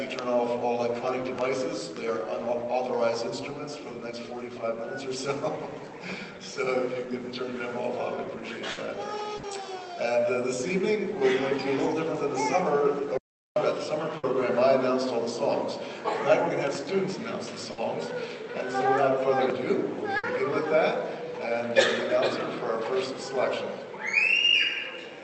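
At 8.71, 9.37, 14.17, 17.71 and 20.17 s there are five bursts of packet loss, each lasting about 90 ms. In each, roughly 60 ms is concealed: the receiver stretches the last sound it had and fades it, so a held buzz or a fading hiss replaces what was lost. The sound then picks up further on, with the material in between skipped. That fill is what separates these bursts from a true dropout. All of this sits on an Opus call path whose audio stops near 8 kHz.

Between 13.18 and 13.56 s comes an audio dropout to silence lasting about 385 ms. The sound cuts off mid-flow and the gap is silent, with no room tone and no decaying fill. That points to the input itself being lost, likely a momentary disconnect or mute upstream of the encoder, rather than packets going missing in transit.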